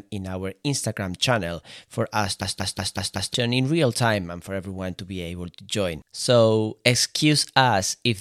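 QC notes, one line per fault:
2.42–3.34 s, system hang loop: a 186 ms slice of the speech repeats exactly five times at 5.38 Hz, giving a machine-gun stutter. The driver stalled while the hardware kept replaying its ring buffer, which fits an 8192-sample buffer. Roughly a second of audio is lost.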